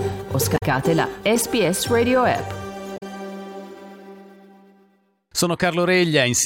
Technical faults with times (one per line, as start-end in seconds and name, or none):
0.54-0.63 damaged data in a compressed stream
2.94-3.03 damaged data in a compressed stream